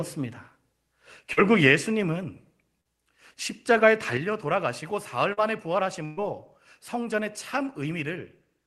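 At 1.33 s and 2.81 s, short concealed packet loss: about 40 ms of audio missed the decoder and was replaced by extrapolated sound, heard as a brief smear or wobble. At 4.17 s there is a sudden gain jump: sound and background both drop by about 7 dB at once and stay lower to the end, likely from a gain setting applied without a ramp. At 5.33 s another concealed loss of about 40 ms leaves a similar short smear. At 6.05 s a burst of packet loss runs for about 120 ms. The receiver stretches the last sound and fades it, and then audio resumes further on with that span missing. Through the call path the audio is band-limited to about 12 kHz, which fits Opus at a moderate call bitrate.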